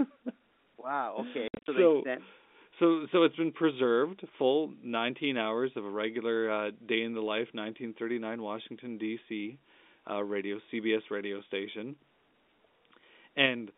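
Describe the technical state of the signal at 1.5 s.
At 1.5 s you're right near the start of a burst of packet loss filled with silence, running from about 1.48 to 1.68 s, just before "so they sent so". Roughly 150 ms of audio goes missing across that 200 ms stretch, the longest hole being 60 ms, which fits 10 ms packets. The receiver drops in dead silence for each lost packet, so the speech stutters with hard-edged gaps, over the narrow G.711 phone band.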